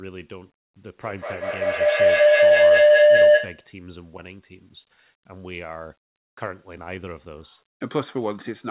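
From 0.92 to 3.75 s, a feedback howl swamps the speech. A microphone and loudspeaker share a room, and each trip round the loop adds level. A tone near 700 Hz swells, the loop repeating about every 200 ms, peaking about 18 dB above the speech.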